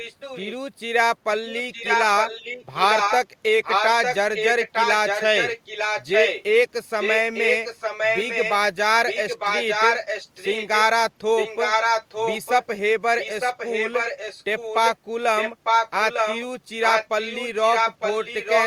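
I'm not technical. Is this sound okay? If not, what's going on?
No. This clip has an echo leak. The speech comes back a second time, about 0.9 seconds late. It happens at 0–0.55 s, 1.51–6.43 s, 7.0–8.54 s, 9.08–10.82 s, 11.37–12.65 s and 13.19 s to the end. The first echo is faint. Later ones are nearly as loud as the speech. The likely cause is a speakerphone at the other end whose echo canceller failed to remove its own playback.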